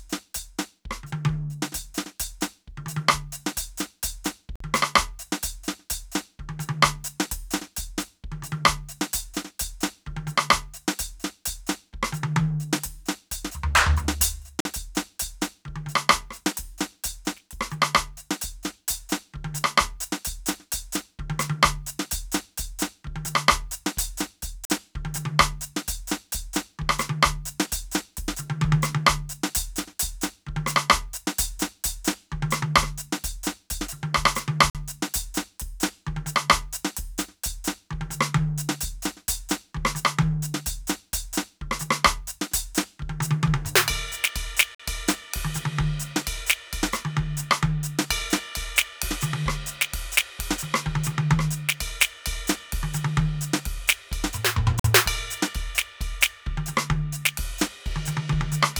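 Gaps between chunks at 4.56, 14.60, 24.65, 34.70, 44.75 and 54.80 s: 48 ms silences every 10 s that pause the music without skipping any, unlike dropouts.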